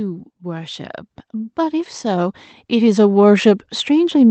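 Speech that swells steadily from 0.39 to 3.75 s, voice and background rising together by about 12 dB, which is automatic gain rising as the control lifts a quiet input. The call codec path, which fits Opus, caps bandwidth near 8 kHz.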